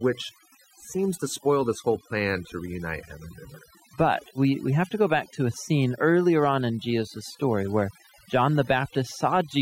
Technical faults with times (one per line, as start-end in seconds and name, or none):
0.00-9.61 overdone noise removal